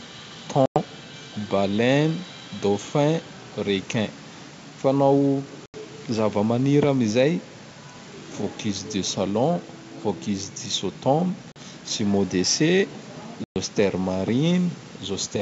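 A speech recording broken by four hard-edged silent holes at 0.66–0.78 s, 5.66–5.75 s, 11.52–11.57 s and 13.44–13.57 s, lasting 100, 80, 40 and 120 ms. Each time the sound resumes slightly distorted, and this settles within tens of milliseconds. This is packet loss on an ADPCM call: several packets at a time went missing and were filled with silence, leaving the decoder's predictor and step size out of step with the sender's until they re-adapted. The surviving audio is clear up to about 7 kHz, which fits G.722 wideband coding at 64 kbit/s, and room noise sits about 27 dB below the speech.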